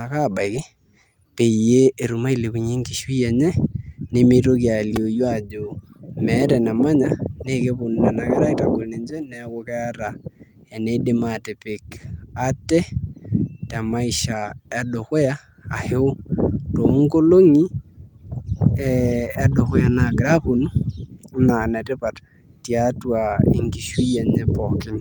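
At 4.96 s, a repeated buffer occurs: fresh audio failed to reach the output in time, so the device replayed its last block of roughly 2.67 ms, which fits a 128-sample buffer, several times over. The hard joins fuse into a brief click-like buzz, and a few milliseconds of speech go missing.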